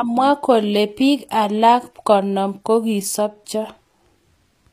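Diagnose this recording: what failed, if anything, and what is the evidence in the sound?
Codec stage, throughout: the speech treble stays bright but plainly gritty, s sounds turn lispy, and nothing sits above 14.9 kHz. The cause is likely HE-AAC compression at a low bitrate near 24 kbps, with band replication rebuilding the treble from copied lower harmonics that misalign.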